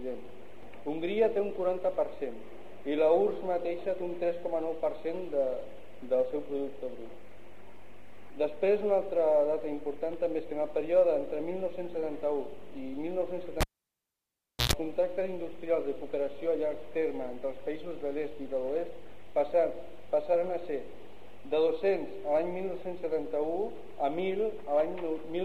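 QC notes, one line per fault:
13.61–14.73 s, cable pulled and plugged in: a pop as the live lead comes out, about 1.07 s of near silence, then roughly 115 ms of 60 Hz mains buzz while only the plug's tip touches and picks up hum, and a second pop as the full connection returns the sound.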